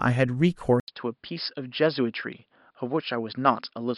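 At 0.8 s the speech cuts out for about 80 ms, then returns duller and boxier, a little quieter, and with a faint new background hiss sitting well below it. From there to the end, nothing reaches above about 5.2 kHz, so the sibilance and airy top are gone. This is likely an input switched to a poorer device mid-recording, with a narrower-band microphone taking over and bringing its own tone, level and noise.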